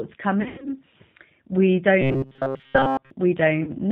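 The whole clip carries the sound of the G.729 codec, and the damage is plainly audible. It's a low-rate speech codec, consistent with about 8 kbit/s, that rebuilds each 10 ms frame from a vocal tract filter, a pitch predictor and a few pulses rather than sending the waveform. So there's nothing above 4 kHz, and the speech has that slightly rough, synthetic edge all the way through.

First event, from about 0.42 to 0.78 s: VoIP packet loss concealed by the speech codec. Around 180 ms of audio goes missing, scattered across a 240 ms stretch, with the longest gap about 100 ms, which fits roughly nine 20 ms packets. The decoder papers over the holes by extending its last pitch and filter at falling gain, so you hear a fading smear of stretched sound. Because each frame leans on the previous one, the speech stays weak and distorted for a little while after real audio resumes.

From about 2.01 to 3.11 s there's robotic sound from repeated short buffers. 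Most of that stretch is a short chunk replayed over and over while the real audio is skipped, and the repetition stamps a fixed 134 Hz buzz on everything. That points to a buffer of roughly 7.5 ms, likely because new audio is arriving too seldom. The result is a rigid, metallic drone that only loosely tracks the speech.

Last, at about 3.63 to 3.71 s, there's another brief packet-loss concealment covering about 40 ms, consistent with two packets. It's a quick fading dip before the speech recovers.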